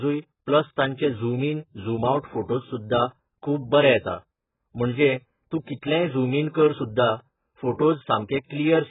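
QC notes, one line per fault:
Throughout, AAC compression: speech sounds dull, smeared and warbly, with a hard flat ceiling at 3.8 kHz on the spectrogram, likely from a very low bitrate near 8 kbps.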